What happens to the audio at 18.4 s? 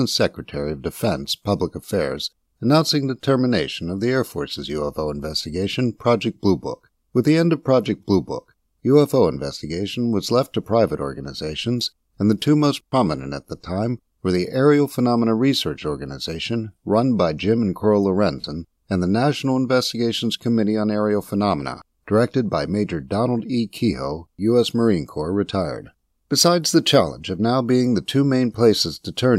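At 18.41 to 18.44 s, about 30 ms of the stream never arrived, consistent with three 10 ms frames, so these are lost LE Audio frames. The LC3 decoder filled the gap by repeating the last spectrum with randomised signs, briefly turning the speech into a hiss-like blur.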